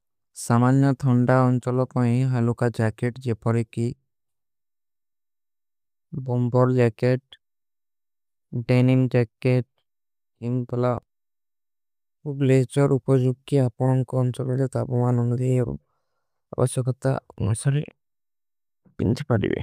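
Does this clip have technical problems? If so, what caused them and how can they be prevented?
No, there are no technical problems to report here.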